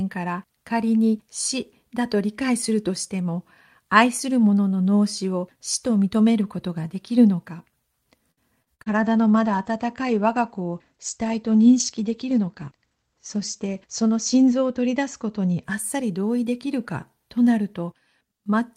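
From 8.31 to 8.89 s, packets went missing repeatedly, leaving four gaps of up to 60 ms. The receiver bridged each one by extending the preceding sound, so nearly a third of that stretch is concealment. The result is a choppy, robotic quality with fragments dropped out.

Right after, at 8.89 s, the call's bandwidth estimate fell and the encoder's bitrate went from 40 to 14 kbps. The coded bandwidth narrowed from 20 kHz to 8 kHz, so until 15.70 s the sound is coarser, watery and muffled, without its top end.

Within that stretch, from 12.23 to 12.79 s, the jitter buffer had built up excess delay. It shed roughly 70 ms by cutting out short pitch-period slices in quick succession, and the audio plays at about 110 percent speed with the pitch unchanged, so it sounds briefly hurried.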